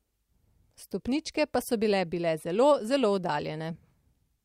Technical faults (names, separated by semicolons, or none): frames out of order